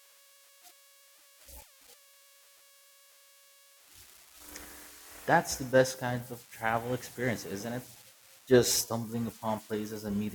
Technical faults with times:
0.00-10.35 converter idle tones

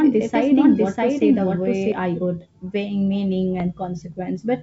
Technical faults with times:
0.00-1.92 doubled audio track
3.60-3.62 bit errors on an ADPCM link

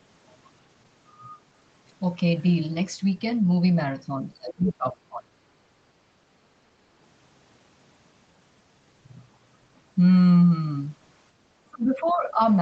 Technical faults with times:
4.22-5.32 speech suppressed in double talk
4.68-4.72 other side's voice leaking through
11.65-12.41 speech suppressed in double talk
12.07-12.12 other side's voice leaking through

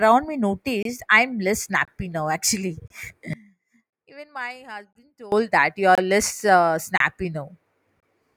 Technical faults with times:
0.83-0.85 gap between chunks
1.85-1.88 gap between chunks
2.88-2.90 gap between chunks
3.33-5.32 one channel inverted
3.90-3.93 gap between chunks
4.93-4.95 gap between chunks
5.95-5.98 gap between chunks
6.98-7.00 gap between chunks
8.00-8.03 gap between chunks

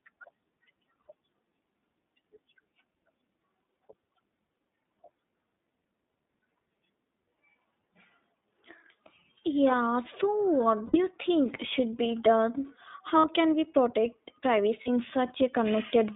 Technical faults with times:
0.00-16.15 iLBC codec
1.06-1.10 lost iLBC frames
6.12 lost iLBC frames
10.86-10.97 lost iLBC frames
13.18-13.26 lost iLBC frames
14.81-14.89 lost iLBC frames

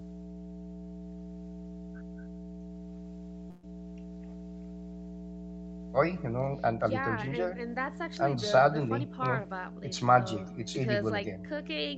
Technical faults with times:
0.00-11.98 mains hum
3.50-3.64 burst of packet loss

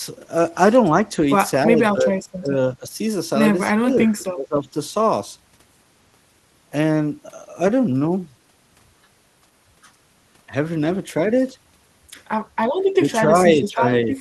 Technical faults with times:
1.66-2.97 speech suppressed in double talk
3.70-4.67 speech suppressed in double talk
13.62-13.86 speech suppressed in double talk

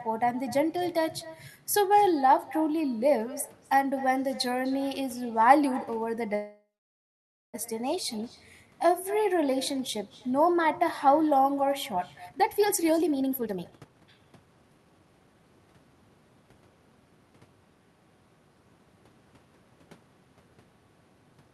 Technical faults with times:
0.00-21.53 echo with no canceller
6.35-7.56 call audio freeze
12.26-15.35 jitter buffer speed-up
12.89 dropped samples

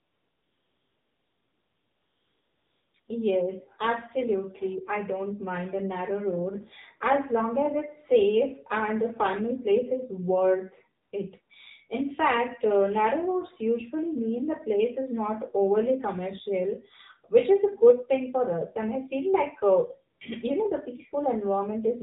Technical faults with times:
0.00-22.02 AMR narrowband mobile codec
0.00-3.08 AMR comfort noise
11.02-11.12 AMR comfort noise
11.42-11.50 AMR comfort noise
20.18 AMR comfort noise

